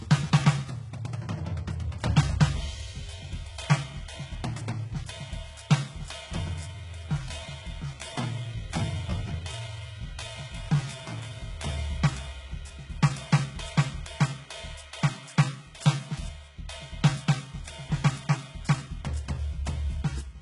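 From the top, the whole music clip carries heavy codec damage, and the likely culprit is HE-AAC compression. The encoder keeps only the lower spectrum and fills in the treble by copying lower bands upward under a coarse envelope, so the top end is a rebuilt imitation rather than the real thing. Nothing survives above 11 kHz, and the amount of damage fits a bitrate around 12 kbps.

Then from 6.55 to 11.79 s there's what sounds like a time-stretched section. The pace drops abruptly to about 0.69 times normal speed while the pitch holds where it was, which is what you get when software lengthens audio by repeating short pieces. That stretch of the music drags noticeably until the normal tempo returns at 11.79 s.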